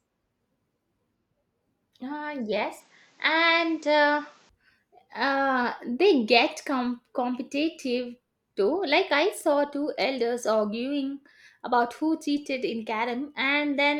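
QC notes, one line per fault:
2.8 to 4.49 s, input switched to a poorer device: for this stretch the speech suddenly goes duller and boxier, with nothing above 8 kHz, then opens back up at the end. That's likely the recording jumping to a lesser mic that passes a narrower band and colours the tone differently. There's no gap at the changeover and the loudness stays about the same, but a faint new noise floor sits well under the speech, roughly 35 dB down.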